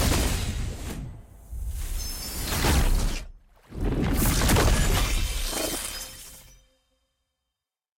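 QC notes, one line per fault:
4.45 s, overlap between stream segments: the time stamps of two adjacent segments claim the same stretch of time, and the player drops roughly 10 ms at the boundary as if it were a duplicate, though that audio was never actually repeated. The waveform jumps straight from one point to a later one with no transition, so a tiny skip is heard. The timing points to segments about 6 s long.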